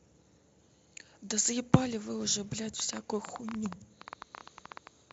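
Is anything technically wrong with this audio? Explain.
Yes. From 2.80 s to 5.12 s, a train of clicks ticks and pops over the speech at an uneven pace, about 10.4 per second, around thirty in all, peaking roughly 15 dB above the signal. The likely cause is interference from nearby equipment or a faulty connection or power supply.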